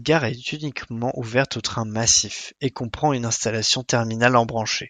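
No technical faults can be heard anywhere in this speech recording. There is nothing at any point in it that calls for comment.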